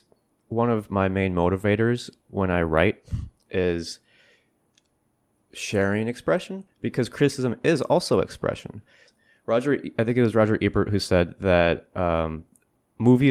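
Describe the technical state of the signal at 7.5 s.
At 7.5 s the speech signal is intact, with no technical fault audible at that moment.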